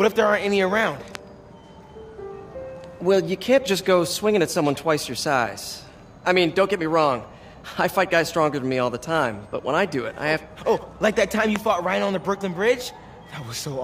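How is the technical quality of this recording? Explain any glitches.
There are two loud pops, at 1.15 to 1.17 s and again at 11.56 to 11.58 s. Each is a single sharp crack, likely a voltage spike from a plug, switch or static, jumping about 15 dB over the sound, which carries on underneath.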